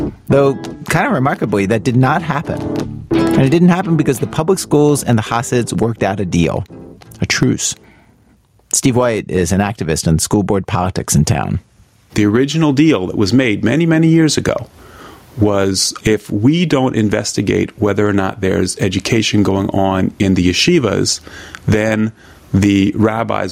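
Gain pumping runs the whole way through. The gain swings by something like 20 dB, pulling down under loud sounds, likely from input gain set far too high feeding a fast limiter.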